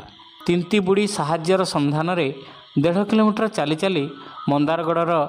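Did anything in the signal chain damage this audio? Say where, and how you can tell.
No, nothing in the signal chain damaged this audio.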